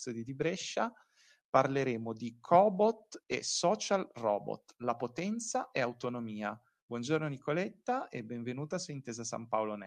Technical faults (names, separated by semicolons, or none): lost packet rebuilt from error correction